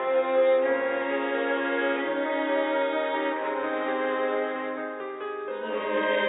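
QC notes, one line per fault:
Nothing stood out on listening to this music clip.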